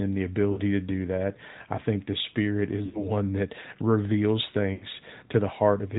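From the start the speech carries the AMR narrowband mobile codec: nothing above 4 kHz survives, and the voice has a buzzy, synthetic edge, which fits a mid-rate mode near 10 kbps. That texture, not just the narrow band, sets it apart from a simple telephone filter.

Lost AMR speech frames interrupt the speech three times. At 0.52 s, before "to do that I", about 40 ms (two frames' worth) smears into a brief warble. At 2.86 s, ahead of "that reveals", and at 4.74 s, after "that reveals", about 80 ms each drags out and fades. The decoder stretches the last sound and lets it decay, so there is no clean, sudden silence as in a dropout.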